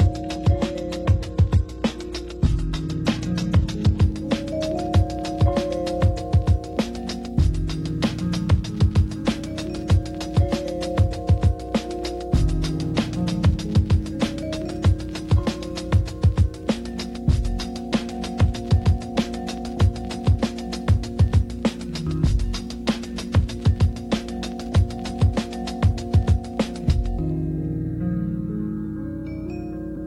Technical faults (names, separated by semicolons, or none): adaptive stream starting at a low bitrate